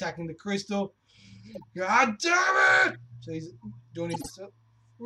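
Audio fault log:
1.54–1.64 s, 2.89–2.96 s and 4.10–4.31 s, corrupt frame decoded: three short chirping, squeaky bursts of noise, reaching about -30 dBFS, then about -35 dBFS, and loudest in the last and longest one at about -20 dBFS. Each spans a handful of consecutive frames whose data was damaged but decoded anyway. Misread gains and spectral codes put energy at the wrong frequencies, so the sound turns into stray tones and noise for about as long as those frames last.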